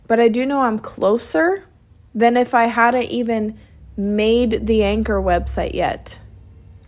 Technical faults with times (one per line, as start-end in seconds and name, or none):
none